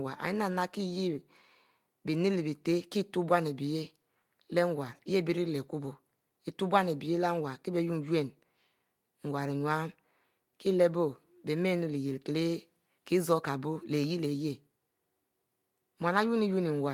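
Nothing technical stands out in this speech recording; it's just someone talking, with nothing to point to at any moment.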